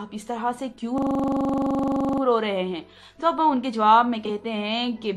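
A system hang loop runs from 0.98 to 2.22 s: the computer or driver froze and one 42.67 ms piece repeats 29 times, a rough 23.4 Hz buzz that fits a 2048-sample buffer.

Frames out of order at 4.25 to 4.30 s: two neighbouring 12 ms blocks play swapped, giving a brief garbled flutter.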